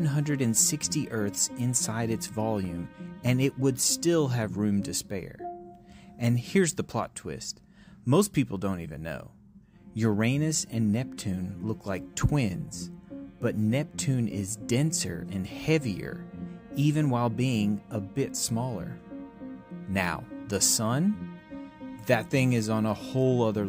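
No technical faults are audible.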